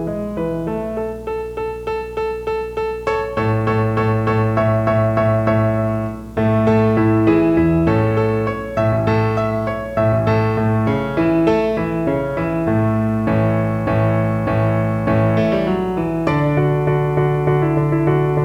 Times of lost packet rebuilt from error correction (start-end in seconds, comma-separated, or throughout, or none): none